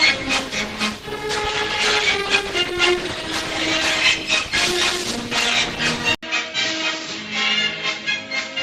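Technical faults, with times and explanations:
0.0 to 6.0 s, adaptive stream starting at a low bitrate: for the first six seconds the treble is thin and partly synthetic, with the smeared, watery artefacts of a heavily squeezed codec. At 6.0 s the quality jumps up in one step with no gap, which fits a player that opened on an Opus stream near 16 kbit/s for a fast start and moved to roughly 64 kbit/s once it had measured the connection.
6.15 to 8.63 s, input switched to a poorer device: after a short dropout of about 80 ms, the sound returns narrower and duller, with nothing above 7.6 kHz, and it is roughly 5 dB quieter. A new noise floor also appears, sitting around 50 dB below the signal. The band limit, changed tone and level, and different background together point to the recording input having likely changed to a lower-grade microphone or a headset call profile.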